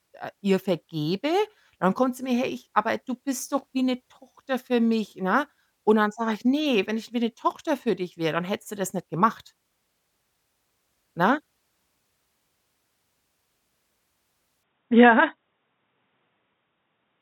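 At 14.63 s the speech abruptly loses its top end and stays that way to the end at 17.21 s: nothing remains above 3.8 kHz, so it turns dull and boxy, with a faint new noise floor far beneath it. The likely cause is the input switching to a poorer device. On a spectrogram the upper band is cut off flat at that instant. The waveform shows no gap and no change in level at the switch.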